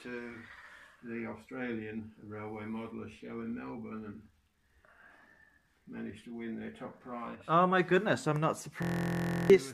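From 8.82 to 9.50 s, a system hang loop replays a 23.2 ms buffer as a 43.1 Hz buzz: identical waveform blocks, evenly spaced spectrogram harmonics.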